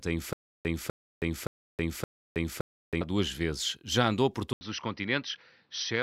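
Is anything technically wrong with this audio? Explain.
Yes, there are two faults in this speech clip.

Stutter with silent gaps, from 0.33 to 3.01 s, ending just before "duas vezes": the same 0.25 s fragment plays four times at an even 0.57 s pace, each repeat followed by about 0.32 s of dead digital silence. This likely comes from the stream or player stalling, replaying its last buffered chunk on each retry and then running dry. Whatever should have been heard during those gaps is gone.

Input switched to a poorer device, at 4.53 s, right after "andou por", and lasting to the end: an 80 ms silence marks the switch, after which the speech turns dull and boxy. Nothing reaches above 6 kHz, the level drops by roughly 5 dB, and new background noise sits around 40 dB below the speech. This is likely the system changing its input mid-recording to a narrower-band microphone or a headset's call profile.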